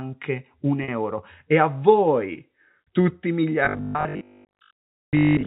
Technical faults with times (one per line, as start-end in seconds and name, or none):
0.84-0.88 packet loss with pitch repetition
3.65-5.46 robotic sound from repeated short buffers